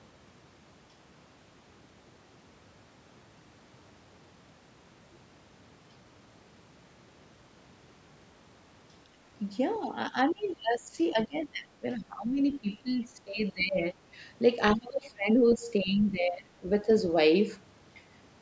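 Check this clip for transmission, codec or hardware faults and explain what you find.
Two faults appear in the second half of this speech clip, both pointing to echo cancellation on a call. The audio, which has nothing above 8 kHz from the call's microphone processing, first shows speech suppressed in double talk. The talker's level dips from 9.78 to 12.41 s, 12.59 to 13.97 s, 14.75 to 16.67 s, and briefly 16.84 to 16.89 s. The deepest drops reach about 20 dB, and the last is only about 5 dB. The likely cause is both sides talking at once. The canceller could not tell the talker from the loudspeaker echo, so it pulled everything down.

The other side's voice leaking through is also heard. Faint scraps come in from 14.69 to 14.74 s and from 15.51 to 15.55 s. They sit about 20 and 25 dB below the speech. Both are brief fragments. This is likely residual echo the canceller failed to remove. 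The talker's device plays the far end on a loudspeaker, the microphone picks it up, and bits of it get through.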